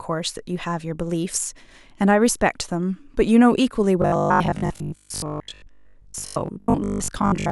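From 4.02 s to 7.50 s, audio likely stopped reaching the playback side on time, so the software kept filling the gaps by replaying its last short buffer, around 20 ms long, while fresh speech was dropped. With roughly 70 percent of this stretch made of repeats, the loop imposes a fixed 50 Hz buzz, and the speech becomes robotic sound from repeated short buffers: a stiff, metallic buzz that only loosely tracks the original speech.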